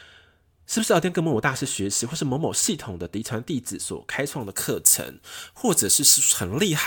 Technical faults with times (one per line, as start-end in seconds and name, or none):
4.40-6.86 pre-emphasis left on